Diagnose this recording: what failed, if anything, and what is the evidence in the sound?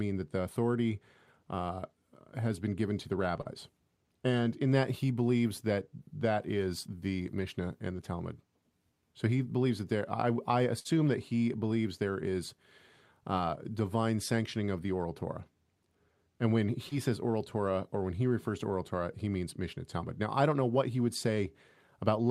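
Two short concealed packet losses point to the network stage, at 3.41 to 3.47 s and 16.89 to 16.93 s. Packets arrived too late, so the decoder extended the preceding sound for 37 ms and 23 ms, respectively, then blended back, briefly smearing the audio over about 40 ms and 20 ms of lost material.

A burst of packet loss, also a network fault, occurs at 10.79 to 10.87 s. The receiver continued the last sound for 58 ms while fading it down, giving a held buzz or fading hiss depending on the sound. The audio then resumes with about 60 ms missing.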